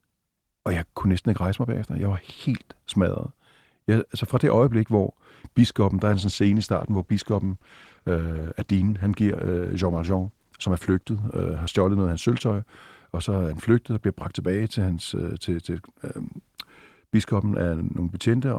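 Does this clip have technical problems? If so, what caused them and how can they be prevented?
Yes, there's a call bitrate drop from 6.03 to 12.59 s, right after "det øjeblik hvor biskoppen" and clearing by "og så er han". The bandwidth estimate fell, so the encoder dropped from 40 to 18 kbps and coded more coarsely until the rate recovered. Putting the call on a steadier, less congested connection would keep the estimate from collapsing.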